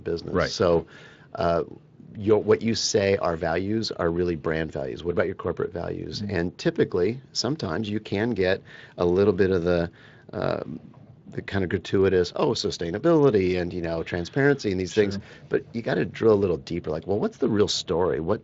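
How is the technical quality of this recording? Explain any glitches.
No glitches can be heard in this speech recording. It has passed through a Speex codec working normally, which leaves a light coding texture and no content above about 7.7 kHz.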